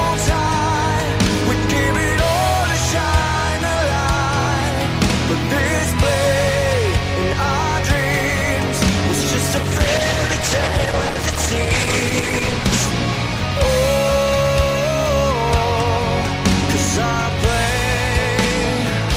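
From 9.63 to 12.97 s, a call bitrate drop makes the audio coarse and watery, consistent with the encoder falling from about 32 to 12 kbps before recovering.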